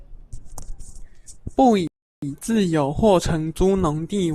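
At 1.87 s the speech drops to silence until 2.23 s, a rebuffering stall: playback starved for data, paused about 0.35 s, then resumed intact.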